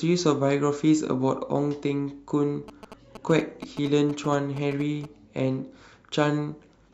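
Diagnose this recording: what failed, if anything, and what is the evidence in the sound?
The fault sits in the analogue wiring: GSM signalling bursts from a nearby 2G handset. From 2.68 s to 5.05 s the speech carries a galloping dit-dit-dit of short buzzes repeating at about 217 Hz, roughly 15 dB below the speech. The pattern fits a phone exchanging brief signalling bursts rather than carrying a call. Some unshielded input stage or cable rectifies those pulsed RF bursts, demodulating their envelope straight into the audio band.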